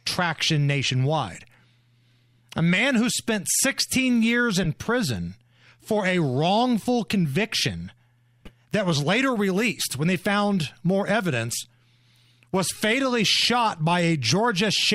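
At 4.63–4.67 s and 8.42–8.51 s the speech carries a corrupt frame decoded: damaged compressed frames, a couple then a few, were played with misread gains, giving a loud glitch and then a fainter one, seen as brief misplaced spectral smears and waveform spikes.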